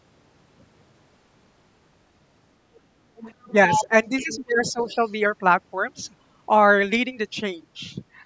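From 3.18 to 3.52 s a faint second voice, about 25 dB below the speech, can be heard underneath it. This is the other side's voice leaking through, likely far-end sound from a loudspeaker that the echo canceller failed to fully remove from the microphone. Around 3.45 to 3.56 s the main speech briefly dips by about 15 dB. This is speech suppressed in double talk, likely the canceller turning everything down while both sides spoke at once. The leak returns much louder from 3.70 to 3.84 s, only about 5 dB under the speech. From 3.79 to 4.97 s the speech keeps sinking and thinning in pieces, by as much as about 20 dB and for roughly 0.7 s in total, likely while the canceller again fails to separate the two voices. Within and just after that span, scraps of the other voice come through at 4.19 to 4.38 s (about 20 dB down) and at 4.66 to 5.10 s (about 30 dB down).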